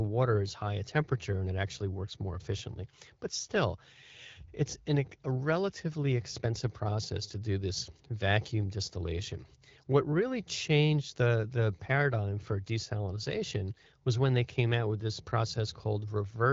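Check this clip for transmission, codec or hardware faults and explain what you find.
No transmission, codec or hardware faults found; the speech is carried over AMR wideband (HD Voice) at 12.65 kbit/s, with the light coding texture and the absence of content above 7.5 kHz expected of that path.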